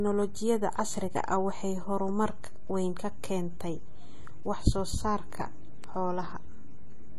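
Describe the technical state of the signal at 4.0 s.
At 4.0 s you're hearing what runs through the whole clip. The speech sounds dull and smeared, with a warbly, fizzy edge on sibilants, and nothing survives above 14.1 kHz. That's likely AAC compression, its hearing-model quantisation starving bands at a low bitrate, something like 32 kbps.

There's also a DC offset across the entire clip, so the waveform sits shifted off zero by a constant. You won't hear it as such, but it eats headroom and shows up as steady energy at the very bottom of the spectrum.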